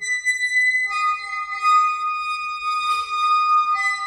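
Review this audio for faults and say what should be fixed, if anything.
Nothing stood out on listening to this recording, so there is nothing here that needs fixing.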